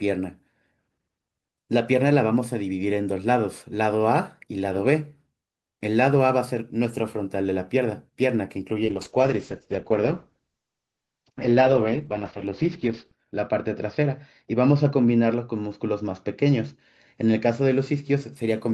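From 8.84 s to 18.41 s the speech turns rough and watery, with the top end cut from 20 kHz to 6 kHz, worst for about 4.35 s. This is a call bitrate drop: the encoder was starved of bits, consistent with a fall from 48 kbps to 8 kbps.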